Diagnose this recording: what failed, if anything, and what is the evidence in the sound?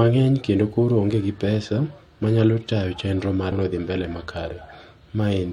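Compressed frames skipped at 3.51 s, a codec-stage fault in decoding or in the stored stream. The speech jumps forward by roughly a third of a second, and the join is a short smeared blip, not a sharp click. A gap that size is consistent with about ten missing frames of roughly 23 ms each. Those frames were either absent from the file or rejected by the decoder as corrupt, and playback resumed at the next valid frame. The overlap between neighbouring frames softens the splice into that brief blur.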